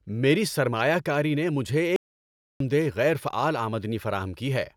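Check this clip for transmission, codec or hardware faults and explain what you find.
One fault turns up: an audio dropout to silence from 1.96 to 2.60 s, about 0.64 s long, ending just before "دہ غیر فعال". The speech cuts off abruptly and the gap is dead silence, with no room tone underneath, so whatever was said there is lost. The likely cause is the input signal disappearing while the recorder kept writing zeros. On the waveform it shows as a nearly flat line; on a spectrogram, a dark vertical band with hard edges.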